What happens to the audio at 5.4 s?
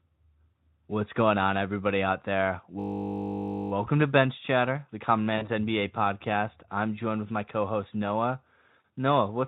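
From 5.37 to 5.49 s, VoIP packet loss concealed by the speech codec: about 40 ms of audio went missing, and the decoder extrapolated from the last pitch and filter, giving a brief buzzy, fading smear. On a spectrogram, frozen harmonics stretch out and dim; the waveform envelope decays.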